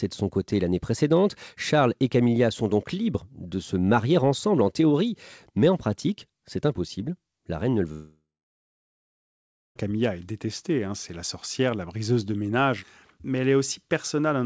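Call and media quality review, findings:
Gap 7.92–9.77 s, right after "reine ne le", audio back at "est détestée". Last sound smears into a fading buzz, then roughly 1.5 s of near-silence. Likely a long network dropout; the receiver conceals, gives up, and the lost stretch never returns. Band tops out at 8 kHz, fits G.722.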